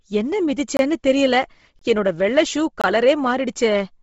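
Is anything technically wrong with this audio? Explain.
Yes. Throughout, the speech is grainy and breathy and stops dead at 7.7 kHz, likely heavy Bluetooth LC3 compression noise-filling discarded upper detail. A spectrogram shows a flat ceiling.

Gaps between chunks occur at 0.77, 1.79 and 2.81 s. Each is a 23 ms hole, one per second, where chunks join. These appear as flat-line dropouts in the waveform.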